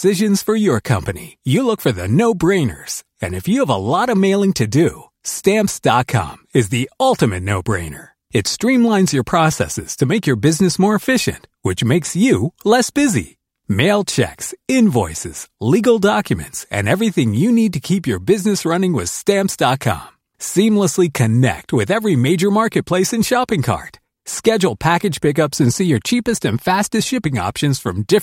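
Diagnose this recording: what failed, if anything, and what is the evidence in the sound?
No faults at any stage.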